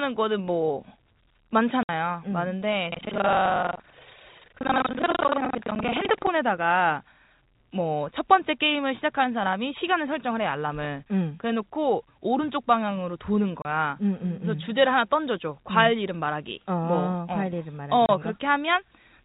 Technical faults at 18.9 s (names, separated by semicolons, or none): none